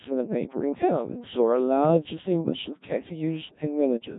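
Codec 2 vocoder damage runs throughout: the speech is rebuilt from pitch and spectral-envelope data as sine waves, sounding heavily robotic and buzzy, nothing above 3.8 kHz, consistent with roughly 1.3 kbit/s.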